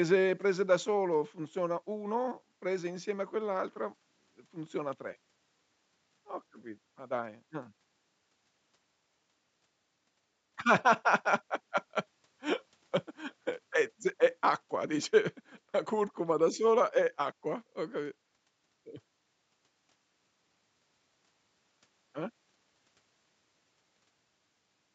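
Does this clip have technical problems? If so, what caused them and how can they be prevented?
No, there are no technical problems.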